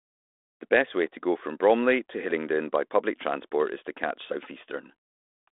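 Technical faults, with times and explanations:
No technical faults are heard anywhere in the clip.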